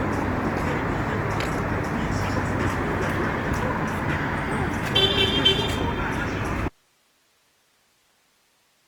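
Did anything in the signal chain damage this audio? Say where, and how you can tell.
Yes, at two stages. Throughout the clip the sound is rough and grainy, with tonal parts turned noisy, but without the swirling holes of MP3. That points to the codec stage, most likely Opus compression in its music (CELT) mode. With the bit budget tight, band energies are kept and the missing detail is filled with folded or noise content. The damage is plainly audible and fits a rate around 24 kbps. Bandwidth remains fullband, with nothing above 20.2 kHz.

The second fault is an audio dropout to a faint residue. At 6.69 s the signal stops abruptly and stays gone to the end of the clip, with no fade. Only hiss remains, around 40 dB below the earlier level. That means the path after the break kept running while the feed into it failed. The likely stage is a buffer, driver or network interruption upstream of a live playback or recording chain.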